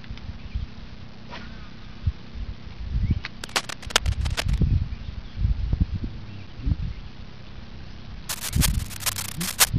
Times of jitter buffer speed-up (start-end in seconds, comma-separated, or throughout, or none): none